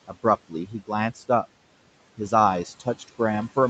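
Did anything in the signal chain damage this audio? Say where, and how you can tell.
Yes, the damage comes from the call processing stage, where the noise suppressor shows audible noise suppressor artifacts throughout. The room noise, sitting about 19 dB below the speech, is pulled down by about 18 dB in the gaps and then rises back under each phrase, so the background pumps. On a spectrogram the noise floor breaks into patchy, speckled blocks that come and go frame by frame.

The same suppressor cuts speech, mistaking quieter parts of the voice for noise. This happens at 0.07–0.25 s (drop of about 15 dB), 0.48–0.9 s (about 17 dB), 1.15–1.45 s (about 12 dB) and 2.65–3.2 s (about 12 dB). Only part of each span is hit, roughly a tenth to a fifth of a second apiece, and those syllable edges sound swallowed. The waveform shows the envelope abruptly caved in, and the spectrogram shows weak consonant energy pulled down alongside the noise. 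The codec's band limit, with nothing above 8 kHz, is separate from this.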